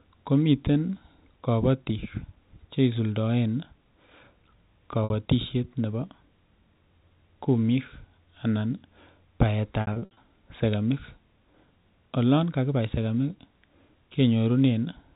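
At 5.04 s and again from 9.81 to 10.17 s there's packet loss with pitch repetition: the receiver loops the last pitch period over lost packets, giving a held, buzzy stutter. The second stretch loses about 210 ms in bursts up to 60 ms over the narrowband telephone sound.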